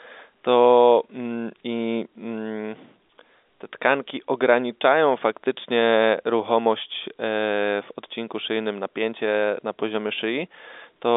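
No technical faults are audible.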